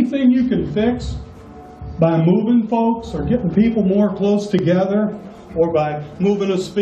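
A tiny skip at 4.59 s: overlap between stream segments, where overlapping timestamps caused about 11 ms of sound to be trimmed, making the waveform jump.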